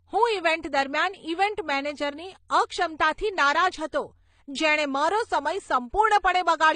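Transcoding between lossy codecs runs throughout: nothing above 9.7 kHz survives, and smeared, swirly artefacts pile up, likely from low-bitrate MP3 re-encoded as HE-AAC.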